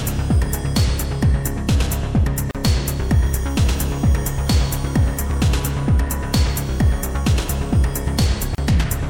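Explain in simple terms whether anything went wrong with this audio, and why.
Two short silences break the audio, at 2.51 to 2.55 seconds (about 38 ms) and at 8.55 to 8.58 seconds (about 34 ms), six seconds apart. These are gaps at a join of encoded pieces. The audio was cut into pieces that were compressed separately and then joined, and each piece kept the padding silence its encoder added. Unlike a dropout, where some sound goes missing, nothing is lost here. The sound picks up exactly where it stopped.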